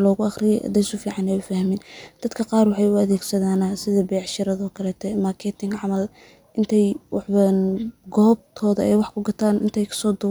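No technical faults are audible.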